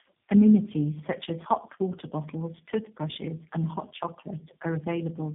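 Throughout, tandem speech coding: three speech codecs recode each other's damage, leaving it rougher and more warbly than any single codec, with nothing above 3.8 kHz.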